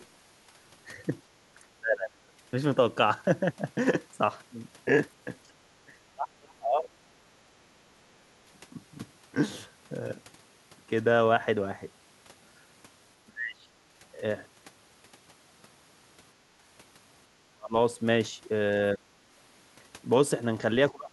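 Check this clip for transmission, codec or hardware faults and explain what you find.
Two echo-canceller faults are present, one recurring and one isolated.

Speech suppressed in double talk occurs seven times: 1.77–2.32 s, 5.46–7.23 s, 7.84–8.15 s, 13.25–13.72 s, 17.35–17.75 s, 18.94–19.28 s, and 20.91 s to the end of the clip. In each window the near-end speech sinks sharply, typically by around 30 dB and by as much as about 35 dB. The likely cause is far-end audio arriving while the local talker was speaking. The canceller could not tell the talker apart from loudspeaker echo, so it attenuated both.

Background gated by the echo canceller appears once, at 16.51–16.62 s. The room tone drops by about 9 dB for roughly a tenth of a second and then returns. Loudspeaker output triggered heavy microphone attenuation, and releasing it brought the background back. The result is a short dip in the ambience.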